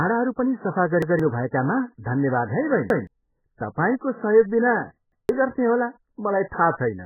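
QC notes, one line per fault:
Throughout: MP3 compression, likely the cause of the heavy damage. Nothing sounds above about 2.1 kHz, so the speech is dull and muffled, and weak detail swirls and warbles as the encoder drops it frame by frame, pointing to a bitrate near 8 kbps.
1.02–1.20 s, 2.90–3.07 s, 5.12–5.29 s: repeated buffer. A 0.17 s piece plays twice with a hard join, stuttering after "पनि सफा", "भएकामा धन्यवाद है" and "तपाईँको सहयोगबिना". New audio arrived late, so the last buffer replayed, which fits an 8192-sample buffer. Roughly 150 ms of sound is lost each time.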